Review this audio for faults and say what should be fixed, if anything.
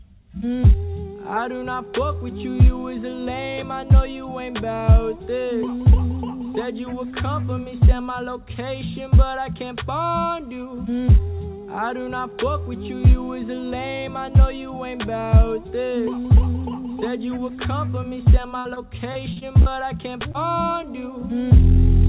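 Repeated packet loss (robotic sound) runs from 18.59 to 19.69 s. Six separate gaps, the longest 60 ms, were each patched by extending the preceding sound, so roughly a fifth of that stretch is synthetic fill. The result is a choppy texture.

Short concealed packet loss occurs between 20.32 and 20.37 s. About 30 ms failed to arrive in time, and the receiver bridged it by continuing the previous signal before blending back in. This leaves a brief smear at that point. The call path's narrowband sound, with nothing above 4 kHz, fits G.711 at 64 kbps.

To prevent both faults, fix the network loss and jitter, and enlarge the jitter buffer or add forward error correction.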